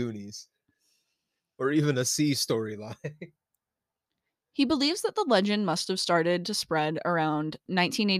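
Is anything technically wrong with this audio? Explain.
No, there is nothing technically wrong with this speech recording. Listening through it, no fault can be heard anywhere in the audio.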